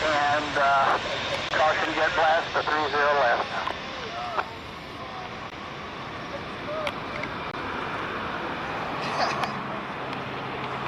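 Timestamps on adjacent 2-second stream segments leave small gaps, which the player fills with silence. This gap between stream segments produces hard-edged holes in the sound at 1.49–1.51 s (about 20 ms), 5.50 s (16 ms) and 7.51–7.54 s (22 ms), with no audio lost.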